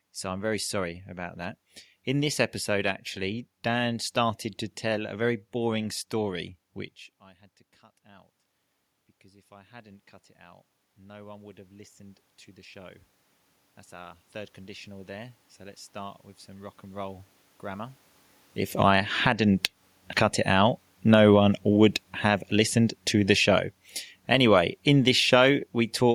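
At around 7 s the speech drops as the talker moves away from the microphone, a level fall of about 22 dB at the input. From 8.02 s to 18.03 s the automatic gain rising fault follows: the gain control, reading a weak input, lifts its gain slowly by about 17 dB over roughly ten seconds. Voice and room noise swell together, so the background noise climbs along with the speech.

Around 18.5 s the talker moves again at the microphone. From 18.67 s to 25.49 s automatic gain falling sets in. The controller backs its gain down by about 11 dB over nearly seven seconds, and the voice and the room noise beneath it sink together as the level settles.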